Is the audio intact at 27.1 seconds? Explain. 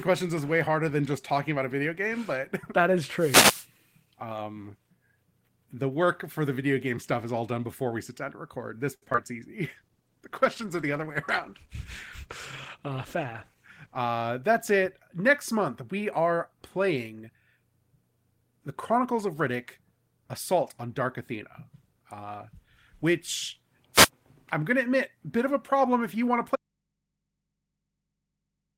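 No. Right at 26.56 s the speech signal was likely lost while the path stayed live, an audio dropout to a faint residue lasting to the end. The speech cuts out abruptly, leaving only a very faint mains hum far below the speech level.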